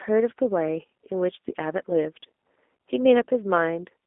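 From start to finish the speech sounds thin, boxed-in and faintly rough, with a buzzy, synthetic edge on every syllable and no air or sibilant brightness above about 3.7 kHz, while the low end is cut below roughly 250 Hz. This is G.729 codec damage: the voice is resynthesised from a vocal-tract filter, a pitch predictor and a few pulses per 10 ms frame, which fits an 8 kbit/s telephone link.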